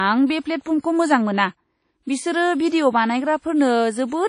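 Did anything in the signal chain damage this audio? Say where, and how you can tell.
Yes. Across the whole speech clip the sound rings and washes, with a hiss that breathes with the signal, and nothing above 10.1 kHz. This is the codec stage, likely WMA compression near 32 kbps: long transform blocks smear quantisation noise over tens of milliseconds and discard weak high components.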